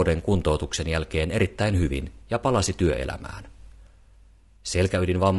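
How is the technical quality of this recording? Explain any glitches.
The speech carries plainly audible codec damage throughout. Low-delay AAC compression, likely AAC-ELD at a bitrate fitting about 32 kbps, leaves the voice rough and grainy. Its short frames blur pitch harmonics, filling the gaps between them with noise, unlike the watery warble of ordinary low-bitrate coding.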